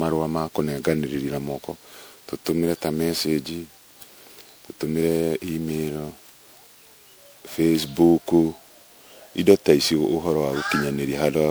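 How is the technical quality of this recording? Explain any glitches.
The recording has audible degradation throughout: generation loss. For the full length of the speech, the sound is swirly, smeared and hollow, with blurred attacks. This likely comes from repeated lossy re-encoding, around ten passes, consistent with an MP3 chain near 128 kbit/s. Each pass quantises on a shifted frame grid, so noise and spectral holes accumulate.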